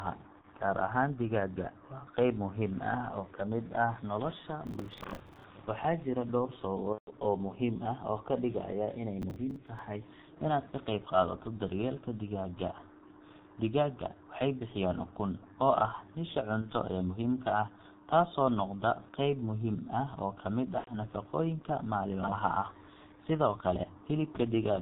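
G.723.1 codec damage runs through the whole clip. This low-rate telephony coder works on 30 ms frames at about 6.3 kbit/s and discards everything above 4 kHz. Its model of the voice also updates only sluggishly, so the damage here is heavy: the speech is muffled and hoarse throughout, and consonants smear into one another instead of landing crisply.

VoIP packet loss concealed by the speech codec first appears at 0.41 to 0.46 s. About 30 ms of audio is missing, which fits a single lost codec frame. The decoder fills the hole by carrying its last pitch and spectral shape forward at falling gain, so the sound briefly turns into a buzzy smear. The voice takes a moment to recover afterwards because each frame depends on the one before it.

Processor overload crackle covers 4.67 to 5.44 s. The system cannot finish its short audio buffers, around 10 ms each, before their deadlines, and a long run of roughly fifty misses goes by. 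Each missed buffer replays a piece of old audio with hard edges, so the speech carries a gritty, tearing crackle that stops once the load eases.

Packet loss concealment returns at 6.92 to 7.10 s and is more severe this time. About 150 ms is lost, which points to several consecutive frames. The extrapolated tone stretches out and fades into coloured noise, and the speech sounds weak for a while afterwards.

Processor overload crackle comes back at 9.22 to 9.79 s. This episode is lighter, with roughly ten missed buffers, but it produces the same rough, tearing grit.

Concealed packet loss strikes again at 16.61 to 16.67 s, a 30 ms gap with a short buzzy patch. It recurs at 20.78 to 20.93 s, where about 90 ms is lost and the tone fades and is muted by the third lost frame.

Chunks out of order occur at 22.24 to 22.32 s. A 40 ms chunk arrives one chunk late and is played after the chunk that should follow it. 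No audio is lost, but the sequence is shuffled, so this moment sounds jumbled, with three hard joins.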